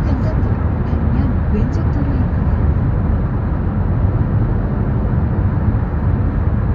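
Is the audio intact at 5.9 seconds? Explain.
Yes, at 5.9 s the sound is intact, with no dropout, click, distortion or other fault.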